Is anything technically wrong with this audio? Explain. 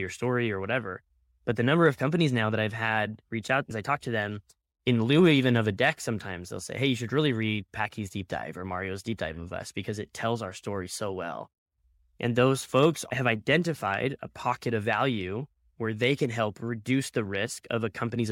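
No, nothing technically wrong turns up anywhere in this speech recording, so there's nothing here to flag.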